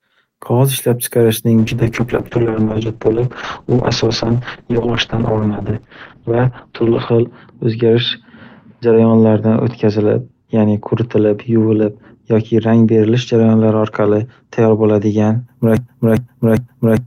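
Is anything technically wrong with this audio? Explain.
Yes, there are two faults. From 1.59 s to 15.51 s there is a call bitrate drop: the encoder falls from 32 to 7 kbps, with audio bandwidth narrowing from 20 kHz to 6 kHz, so the speech turns coarse and muffled for about 5.5 s at the lowest rate. From 15.77 s to the end there is a broken-record loop: a 0.40 s fragment repeats back to back, likely from a stalled stream resending its last buffered piece, and the speech that should follow is lost.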